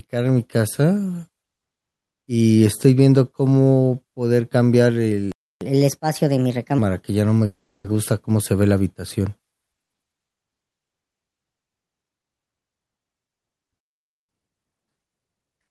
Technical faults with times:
5.32-5.61 playback stall
5.61-6.78 catch-up at higher speed
7.45-7.86 call audio freeze
13.79-14.29 playback stall
14.29-15.71 catch-up at higher speed

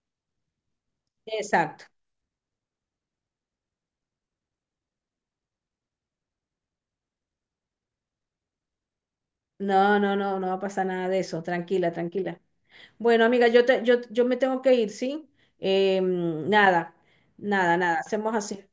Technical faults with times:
none

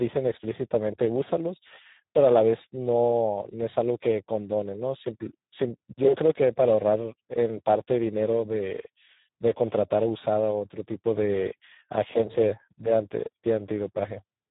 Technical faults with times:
0.00-14.50 Speex codec

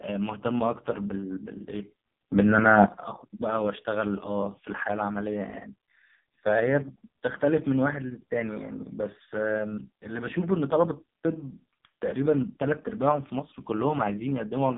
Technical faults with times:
0.00-14.77 AMR narrowband mobile codec

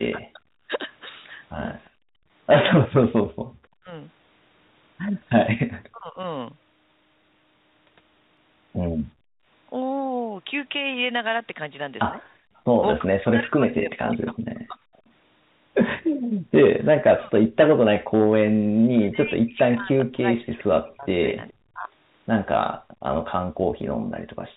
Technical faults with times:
0.11-0.69 speech suppressed in double talk
1.85-1.89 echo leak
1.90-3.52 background gated by the echo canceller
3.80-6.19 speech suppressed in double talk
8.37 dropped buffer (overrun)
9.13-12.65 background gated by the echo canceller
12.56-15.09 echo leak
13.02-24.57 speech suppressed in double talk
22.78-23.03 background gated by the echo canceller
23.80 dropped buffer (overrun)

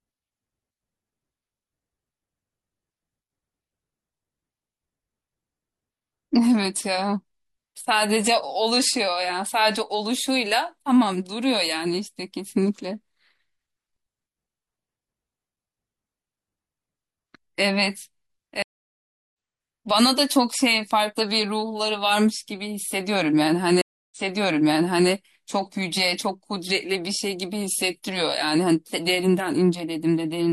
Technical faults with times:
18.62-19.33 stream reconnect
23.81-25.10 stream reconnect

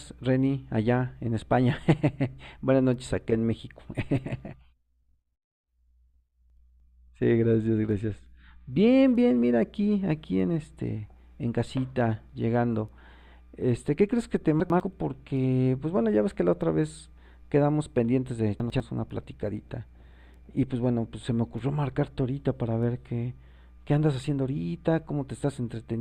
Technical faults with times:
6.50-6.80 chunks out of order
14.60-14.80 chunks out of order
18.60-18.80 chunks out of order

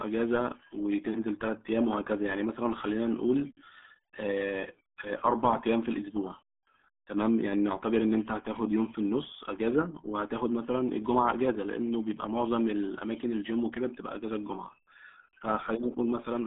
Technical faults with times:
0.00-16.46 RealAudio 14.4 codec

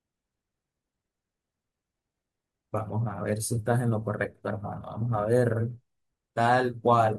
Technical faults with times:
0.11-7.18 clock slip clicks

